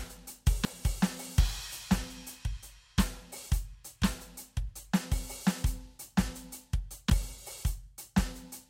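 Music with compressed frames skipped at 0.65 s: the audio jumps ahead by about 150 ms, which fits several whole codec frames being dropped or rejected by the decoder. Unlike a dropout, there's no silent gap; the music simply jumps ahead at the join.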